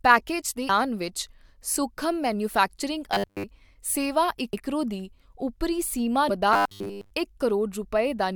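At 0.68 s, just after "ਪੈਕੇਜ ਦੇ", damaged data in the compressed stream makes the decoder lose sync and hunt for the next frame header. The same thing happens at 4.52 s, right before "ਦੀ ਉੱਪਰੀ ਸੀਮਾ", and at 6.29 s, just after that phrase.

From 3.12 to 3.44 s and again from 6.53 to 7.10 s, the sound turns into a rigid, metallic buzz at 100 Hz. The likely cause is robotic sound from repeated short buffers: a stretch of about 10 ms is replayed in place of most of the real audio.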